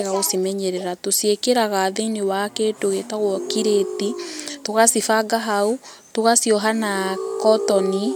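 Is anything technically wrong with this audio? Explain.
No, nothing technically wrong turns up anywhere in this one, so there's nothing to flag.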